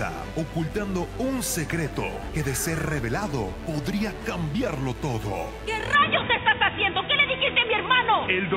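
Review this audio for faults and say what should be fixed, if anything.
A steady, raspy mains buzz runs under the whole recording, sitting roughly 25 dB below the sound. It is built on a 50 Hz mains supply: sharp switching spikes, twice per cycle, from a dimmer, a rectifier or an unshielded run leak into the signal path and spread as a dense ladder of 50 Hz harmonics up into the kHz range. To prevent it, move the chain away from dimmers and power supplies, use shielded balanced cabling, and fix any ground loops.

From 5.95 s to the end at 8.57 s, the sound abruptly turns dull and boxy with no gap at the change. Everything above 3.8 kHz disappears, the level shifts by around 5 dB, and a new noise floor appears roughly 45 dB down. This is likely an input switched to a poorer device partway through, such as a fallback microphone or a headset's narrowband call profile. To prevent it, lock the recording input to the intended microphone and disable automatic device switching.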